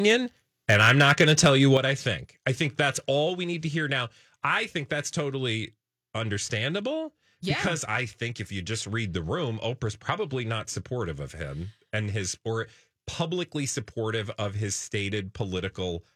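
Input gain set too high likely drove the converter past its limit from 0.69 to 1.63 s, a microphone overload running about 7 dB over full scale. The speech peaks are flattened, with roughly two percent of samples clipped, giving the loudest syllables a harsh, crackling edge. At 1.77 s the microphone volume is stepped down in a single jump of 7 dB, likely the call software reacting to that distortion. Voice and background drop together at once, just before "I think I think".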